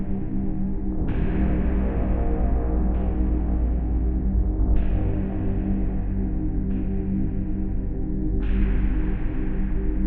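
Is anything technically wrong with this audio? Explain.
No, nothing technically wrong can be heard here.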